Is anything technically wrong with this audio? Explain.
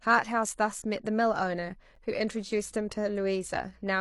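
Yes, two faults are audible in this speech clip.

At 1.95 s there is a gap between stream segments: the timestamps of adjacent 2.0 s segments leave a 10 ms hole that the player fills with silence. It is heard as a brief, hard-edged dropout in the speech, with no audio actually missing.

From 2.55 s to the end, mains hum appears: power-line interference, likely from a ground loop or a nearby transformer, couples into the signal. It is a steady 60 Hz low tone, roughly 30 dB below the speech, continuing under it until the clip ends.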